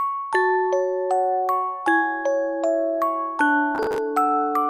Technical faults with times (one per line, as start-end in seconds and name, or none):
3.75-3.98 processor overload crackle